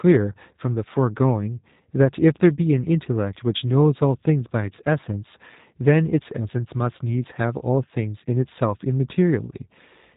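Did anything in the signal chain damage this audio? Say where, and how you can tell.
Yes. The damage comes from the codec stage, a G.729 codec, and it runs throughout. Nothing passes above 4 kHz. The speech sounds rough and synthetic. The coder rebuilds each frame from a vocal tract filter, pitch predictor and sparse pulses, which fits an 8 kbit/s stream.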